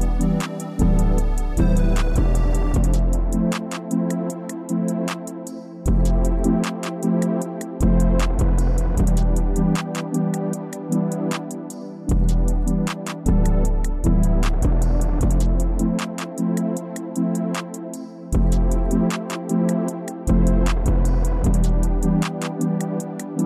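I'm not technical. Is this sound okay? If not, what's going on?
Yes, nothing wrong can be heard in this sound.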